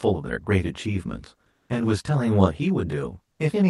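Channel delay (comb filtering) runs through the whole speech clip. One channel arrives roughly 20 ms behind the other, and when the two are summed to mono, the content they share cancels at a regular series of frequencies, starting around 20 Hz and continuing in evenly spaced notches up the spectrum. Those fixed gaps in the response give the speech a rough, slightly doubled colouring that stays constant because the delay never changes.

Comfort noise replaces the background from 1.51 to 1.69 s, a stretch of 180 ms. The real background, sitting about 54 dB below the loudest passages, gives way to a steady, featureless synthetic hiss, and the level shifts by about 4 dB. The likely cause is discontinuous transmission, where the sender stops sending audio during a detected pause and the receiver fills the gap with generated noise shaped roughly like the room.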